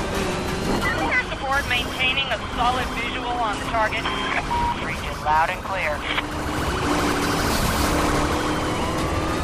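The signal holds steady from beginning to end, with no audible technical faults anywhere in the audio.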